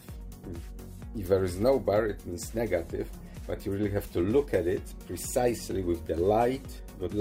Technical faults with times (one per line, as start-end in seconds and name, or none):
none